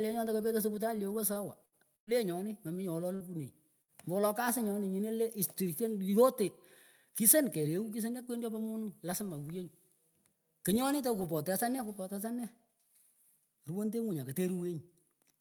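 A speech recording with network playback faults early on. At 1.33 to 1.38 s there is a short stall from a late packet. A packet missed its playout time and the jitter buffer ran dry. The receiver stretched the current sound by about 20 ms until the data arrived. Nothing is lost, but that moment is held slightly too long, and playback runs 20 ms later from then on. Four bursts of packet loss follow, at 1.65 to 1.75 s, 1.96 to 2.10 s, 3.15 to 3.23 s and 3.82 to 3.91 s. In each, packets never arrived in time to play. The receiver extended the last sound to bridge the hole and faded it down. Then speech jumps ahead. About 60 ms goes missing in three of them. The one at 1.96 s loses about 120 ms and drops to near silence for most of its length.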